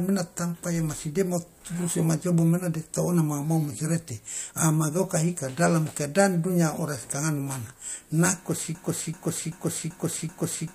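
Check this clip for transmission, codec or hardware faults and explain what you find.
There's one fault, a broken-record loop, from 8.75 s right through to the end. A 385 ms slice of the speech repeats exactly, back to back, five times, and whatever should have played there is lost. The likely cause is a stalled player, encoder or stream resending its last buffered fragment.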